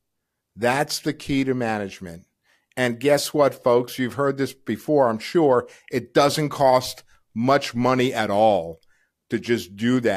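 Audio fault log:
No faults detected.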